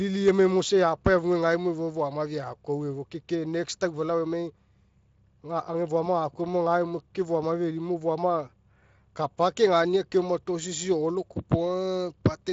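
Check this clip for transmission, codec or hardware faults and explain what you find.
No faults found in this clip.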